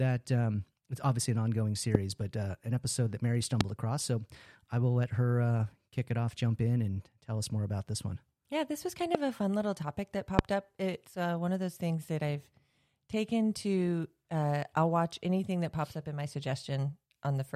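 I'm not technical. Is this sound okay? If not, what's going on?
No. Four loud pops come from a sudden electrical jolt, likely a plug, switch or static discharge, that jumps into the speech at 1.95, 3.61, 9.15 and 10.39 seconds, between "it's obviously an ongoing" and "but uh an episode", after "this was kind", and after "fun little topic that". Each is a sharp crack over the talking, which carries on underneath.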